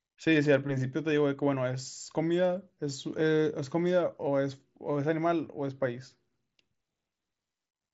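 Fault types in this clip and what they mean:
Concealed Bluetooth headset packet loss: at 2.74 s about 23 ms goes missing, and the receiver loops recent waveform over the gap, leaving a brief buzzy blip.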